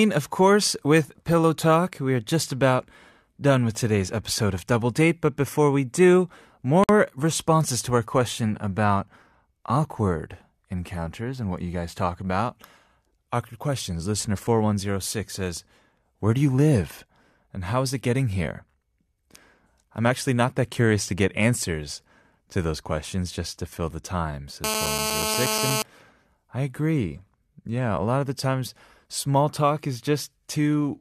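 At 6.84 s, right after "but before we do", the speech drops into dead silence for about 54 ms, with smeared edges, then resumes exactly where it stopped, on "responses to our question". This is a gap at a join of encoded pieces. The recording was encoded in separate sections that were spliced without trimming. The encoder's start-up delay and the padding on the final frame both remained, leaving a short hole in otherwise continuous sound.

From 24.64 s to 25.82 s, just after "to fill the time", a hard, raspy buzz sits on top of the speech. It is nearly steady and only about 2 dB below the speech level. This is GSM phone buzz. A nearby 2G phone on a call transmits in bursts 217 times a second, and the audio circuitry rectifies those radio pulses into a 217 Hz tone with many harmonics that has nothing to do with the speech.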